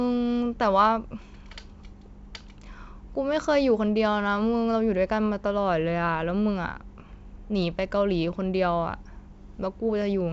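Speech carried over G.722 wideband telephone coding at 64 kbit/s, with the band extending to 7 kHz and any trace left by the coding faint at most, shows no technical fault.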